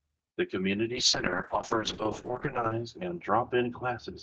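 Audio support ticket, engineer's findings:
Call bitrate drop, 0.95 s to end of clip. Speech turns rough and watery, top end cut from 12 kHz to 8 kHz. Sounds like the Opus encoder fell from about 32 kbps to about 6 kbps after a falling bandwidth estimate, and stayed at that floor for about 1.8 s.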